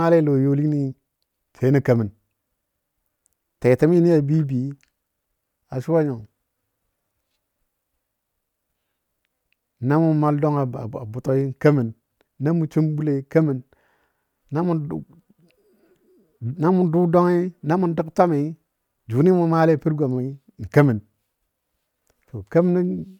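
Nothing technically wrong turns up anywhere in this speech recording, so there's no fault to point to here.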